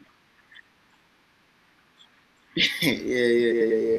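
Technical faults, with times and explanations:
2.05–2.25 s and 3.51–3.71 s, frames out of order: two adjacent runs of coded frames, each about 93 ms long, arrived swapped and were decoded as received. Each stretch plays its second half first, giving a garbled flutter. No time is lost.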